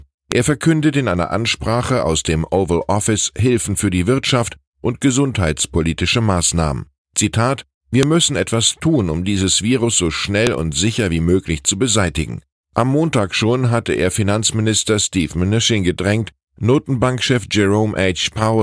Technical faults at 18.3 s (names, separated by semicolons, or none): none